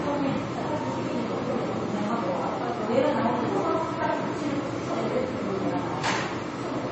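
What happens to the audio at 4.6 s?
At 4.6 s, as throughout, the sound carries transcoding between lossy codecs, likely an AAC-style encode re-encoded to low-bitrate MP3, with smeared, warbling artefacts and a spectrogram wall above 8.2 kHz.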